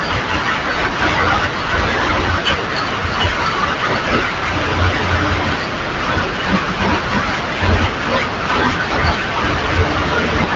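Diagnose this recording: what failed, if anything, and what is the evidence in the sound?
Nothing failed; the recording shows no faults.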